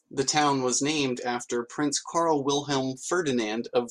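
Nothing goes wrong in this bit of speech, so there's no technical fault to point to anywhere along the way.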